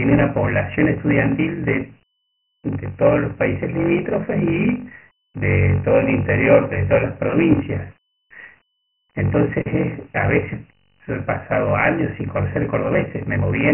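Block size mismatch (padded), present for the whole clip: each block arriving from the earlier stage is shorter than the block the next stage reads, and the shortfall is filled with silence. These regular gaps produce a buzz at about 46.9 Hz, which fits a 1024-sample read block at 48 kHz. The speech plays at 0.861 times its normal speed, so it sounds drawn out while its pitch stays about normal.

Dialogic VOX ADPCM, also present throughout: the speech has been through heavy 4-bit OKI ADPCM coding at 24 kbps, which points to a 6 kHz sample rate. Nothing is present above 2.9 kHz, so the sound is dull and telephone-narrow. The coarse 4-bit steps leave a gritty hiss that follows the speech and rises and falls with it.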